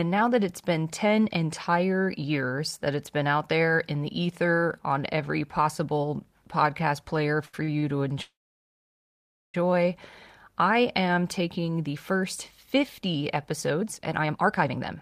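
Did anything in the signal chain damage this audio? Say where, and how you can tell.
Yes. The network path damaged it three times.

From 7.45 to 7.83 s, just after "every possible podcast player", repeated stalls (stutter) break the speech. Four short gaps, the longest 80 ms, fill about 42% of that span. Late packets kept draining the jitter buffer. Nothing is lost, but it drags.

From 8.22 to 9.55 s a call audio freeze inserts 1.32 s. The last sound is held briefly, then about 1.2 s falls silent. Speech resumes where it stopped. Packets were likely held up in transit, so delay grew by the whole gap.

From 13.70 to 14.98 s a jitter buffer speed-up runs speech at 142% of normal rate, pitch unchanged. Roughly half a second is trimmed away in small pitch-period cuts. The receiver is shedding built-up delay, so the voice sounds hurried.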